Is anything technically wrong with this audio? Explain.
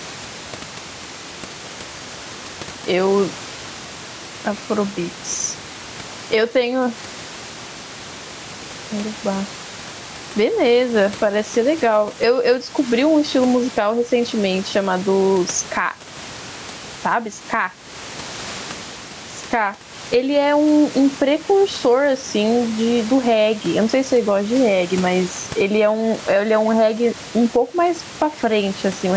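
Yes. Gain pumping runs through the whole speech clip. The background room noise swells up in the pauses and then ducks by around 10 dB under each loud syllable. The likely cause is gain set far too high with a fast limiter clamping down, which leaves everything squashed and breathing.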